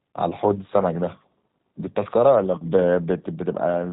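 Throughout the speech, the sound is slightly rough and synthetic, with nothing above about 3.8 kHz. This is plainly audible G.729 codec damage: a filter, pitch predictor and sparse pulses rebuild each 10 ms frame, which fits an 8 kbit/s link.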